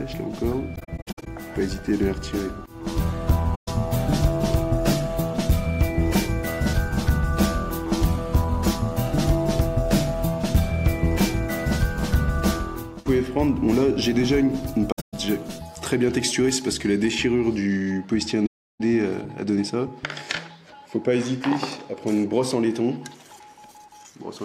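The audio drops out in soft-edged holes at four points, which is AAC frame loss with muting: the decoder zeroes the missing frames, so the overlapping windows fade the sound down and back up instead of clicking. At 0.75 to 1.27 s the gaps are scattered, about 277 ms missing over 512 ms with the longest hole around 70 ms. Then 3.55 to 3.68 s is a single 128 ms hole, about the length of six frames of roughly 21 ms. At 14.92 to 15.14 s, 192 ms goes missing across 213 ms, mostly in one stretch of roughly 150 ms. The last and longest is 18.46 to 18.81 s at 341 ms. Separately, from 14.67 to 17.11 s the treble jumps up and everything turns thin, bright and hissy on the sibilants, which is pre-emphasis left on. The boost follows the CD 50/15 µs curve, about 8 dB up at 10 kHz relative to 1 kHz, and the matching de-emphasis cut was never applied on playback. The 14.92 s dropout falls inside that bright stretch.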